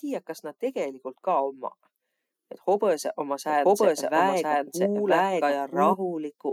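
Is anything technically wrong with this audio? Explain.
Yes. From 3.49 to 5.93 s, a doubled audio track: the speech repeats about a second late at roughly equal level, likely a second, slower capture path. Unlike an echo, it is unfiltered, never decays, and starts and stops abruptly.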